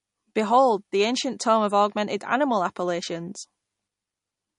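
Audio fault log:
throughout, MP3 compression: likely a starved encode, fitting about 40 kbps, that cuts everything above 10.5 kHz and drops weak detail, leaving the speech dull and watery.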